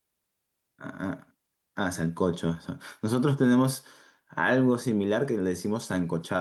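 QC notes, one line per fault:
No technical faults are present in the signal, with level, continuity and frequency content holding steady across the whole speech recording.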